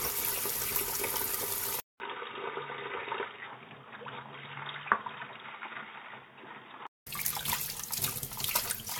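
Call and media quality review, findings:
Generation loss, whole clip: swirly, smeared, hollow texture, with blurred attacks and no content above 17 kHz. Likely cause: repeated lossy decode and re-encode, roughly four passes. The bandwidth and artefacts point to an AAC-LC chain near 96 kbit/s. Each pass re-quantises on a shifted frame grid, so coding noise and spectral holes accumulate beyond what one encode at that bitrate would produce.

Input switched to a poorer device, 1.8 to 7.07 s: a 200 ms dropout at 1.8 s, then dull, boxy sound band-limited to 3.8 kHz. Level falls about 5 dB, and a new noise floor sits about 35 dB below the signal. Likely cause: capture moved to a narrower-band microphone or headset call profile, with full bandwidth restored at 7.07 s.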